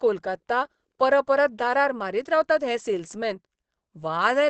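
A short speech clip with plainly audible codec damage from start to finish. Nothing is present above 8.5 kHz, so the top of the spectrum is simply gone. The sound is muffled and hoarse. That character points to Opus compression, most likely at a low rate in its speech mode, around 16 kbps in the wideband setting. At such rates the encoder narrows the band and models the signal coarsely, leaving this dull, rasping texture.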